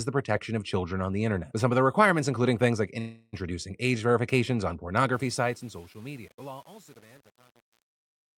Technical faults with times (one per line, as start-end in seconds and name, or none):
2.99-3.35 call audio freeze
5.13-8.38 truncation distortion on a fade